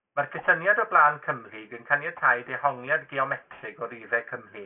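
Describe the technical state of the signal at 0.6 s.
At 0.6 s the speech carries aliasing, present across the whole clip rather than at this moment alone. The sound points to a drop from 44.1 kHz to about 6 kHz with no anti-alias filter, so content above 3 kHz folds back down as false, unrelated tones roughly 25 dB below the speech, giving sibilants a gritty, metallic edge. On a spectrogram, energy runs hard up to a sharp ceiling at 3 kHz, with mirrored streaks beneath it.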